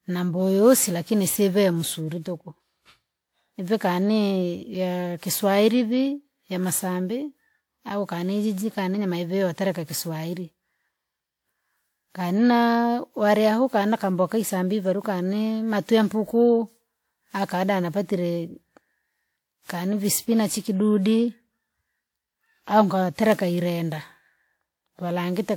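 Generation loss runs through the whole speech clip, which sounds swirly, smeared and hollow, with blurred consonant attacks, more than a 128 kbit/s WMA 1 stream alone would explain. It is likely from about ten re-encodes on shifting frame grids, compounding quantisation noise, with nothing above 20.1 kHz.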